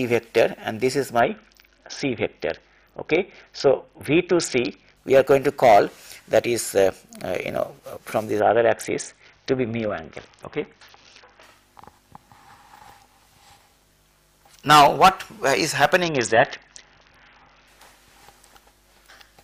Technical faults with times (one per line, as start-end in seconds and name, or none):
1.19-4.97 Bluetooth SBC bit pool drop
8.40-11.43 Bluetooth SBC bit pool drop
16.02-17.67 Bluetooth SBC bit pool drop